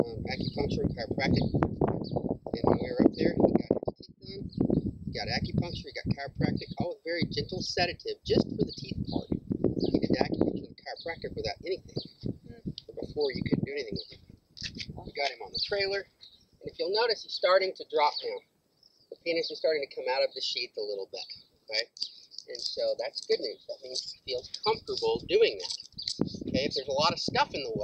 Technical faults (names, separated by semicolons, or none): none